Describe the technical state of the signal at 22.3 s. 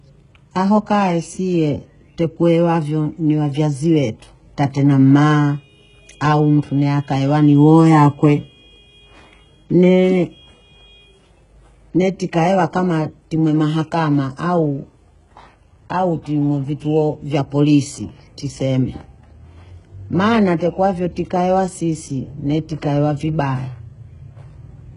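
Likely HE-AAC compression, running through the whole clip: treble above the crossover is rebuilt from copied lower bands, with nothing above 11 kHz, so s sounds turn gritty and metallic, fitting roughly 12 kbps.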